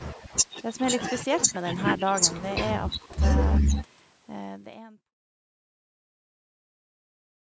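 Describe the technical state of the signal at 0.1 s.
At 0.1 s the speech signal is intact, with no fault audible at that moment.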